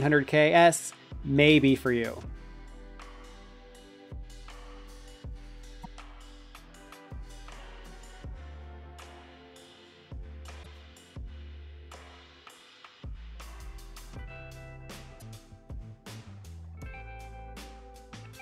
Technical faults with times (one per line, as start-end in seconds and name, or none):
0.77-0.79 damaged data in a compressed stream
5.83-5.86 damaged data in a compressed stream
10.59-10.66 damaged data in a compressed stream
15.17-15.22 damaged data in a compressed stream